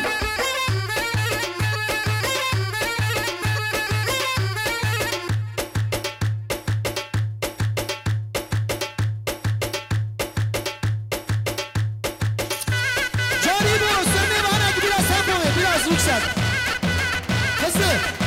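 Periodic USB or driver dropouts run from 0.45 s to 17.85 s, repeating every 1.02 s, about twenty in all. Each time the bus or driver stalls, a tiny sliver of audio, well under a millisecond, is skipped, leaving a regular tick wherever sound is present.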